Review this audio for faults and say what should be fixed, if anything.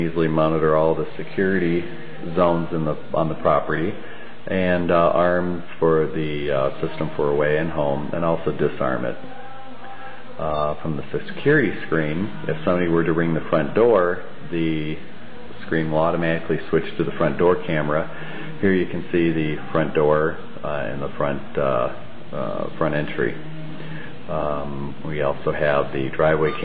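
Nothing here needs fixing, since no faults turn up anywhere in the recording.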